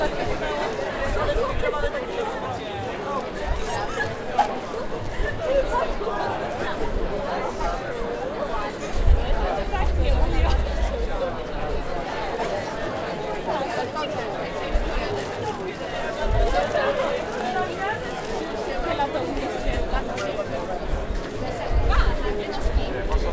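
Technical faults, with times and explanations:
No technical faults are heard in this audio.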